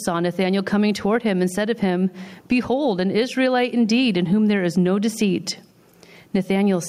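Throughout, the gain swings by about 15 dB, pulled down under loud syllables. This is gain pumping, likely from excessive input gain driving a fast limiter.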